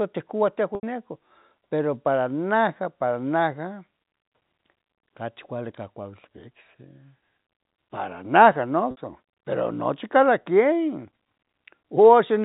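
A speech recording carried over G.711 telephone coding, with nothing above 4 kHz, shows two dropouts concealed by packet loss with pitch repetition: 0.75 to 0.83 s (80 ms) and 8.91 to 8.97 s (60 ms). In each gap the receiver loops the last pitch period, so the sound briefly holds a buzzy, frozen tone. The waveform shows identical repeating cycles shrinking toward silence, and the spectrogram shows flat harmonic stripes before normal speech resumes. The gap lengths fit runs of lost 10 ms packets.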